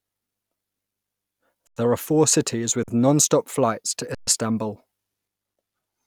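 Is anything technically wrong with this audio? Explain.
Yes. This speech has three underruns with held sample: 1.67 to 1.77 s (about 93 ms), 2.83 to 2.88 s (about 46 ms, between "four cities with" and "nonstop flights to"), and 4.15 to 4.27 s (about 126 ms, after "with nonstop flights to"). Each time the output buffer ran dry, so the converter froze on its last value. The waveform goes flat and the sound stops dead, and there's almost no click. Nothing is skipped: playback picks up exactly where it paused, so it resumes softly. A dropout to zero or a lost packet would click or jump. The first two gaps fit 4096- and 2048-sample buffers.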